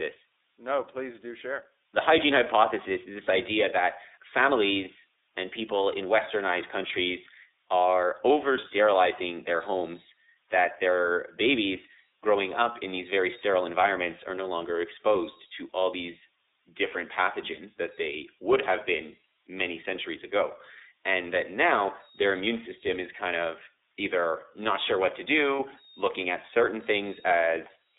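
Speech runs through two faults for its whole length. A switching supply whistle sits high in the band, between 3.7 and 4.2 kHz, around 4 kHz. It is roughly 20 dB below the speech. A power supply is running in an audible burst mode, or beating against another supply. The result is a high whistle.

The speech also carries plain iLBC codec damage. Everything is confined to a telephone band of about 300 Hz to 3.7 kHz. Nothing above that survives. The voice sounds clear but rough and slightly synthetic. The codec rebuilds each short frame's excitation from a compact model rather than the true waveform. The texture fits iLBC's 30 ms frame mode at about 13.33 kbps.

Lost iLBC frames come next. The first is at 8.61 s and lasts 30 ms. The second is at 25.56 s, also lasting 30 ms. Each gap fits a single dropped packet. The decoder fills the hole by repeating the last pitch cycle with added noise. 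This is heard as a brief held, slightly buzzy or breathy vowel sound. Each iLBC frame decodes independently, so the speech snaps back immediately after each gap.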